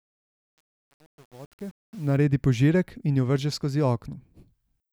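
Truncation distortion on a fade runs from 0.0 to 2.17 s, across the fade-in at the start of this speech clip. The gain stage drops the low bits without adding dither, and the grit fits an 8-bit resolution. While the level is lowest, the waveform collapses into a few coarse square steps. From 0.0 to 2.0 s the rising speech sounds gritty, until the fade smooths out near 2.17 s.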